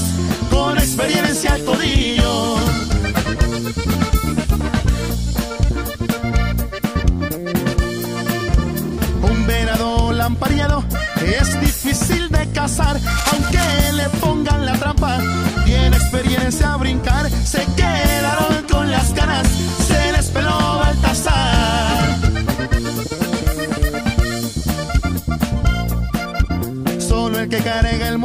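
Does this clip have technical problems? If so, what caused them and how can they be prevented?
Yes. From 13.04 to 13.78 s, uneven scratching about 10 dB below the signal rustles over the sound. This cable scratch noise likely came from a worn connector shifting, making its contact resistance jump. Replace worn leads and fix cables in place so they cannot move while recording.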